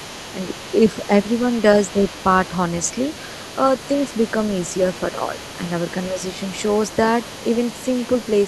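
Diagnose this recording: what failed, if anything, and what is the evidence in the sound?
A faint second voice runs under the talker throughout, sitting roughly 20 dB down. This is the other side's voice leaking through, a call-processing failure: the far end, played on a loudspeaker, likely reached the microphone and was only partly removed by the echo canceller.

The talker briefly dips by a few dB at 0.92–1.10 s, 1.93–2.05 s, 5.12–5.21 s and 6.13–6.23 s. That is speech suppressed in double talk, again in call processing: with both sides active, the echo canceller likely could not separate them and turned both down.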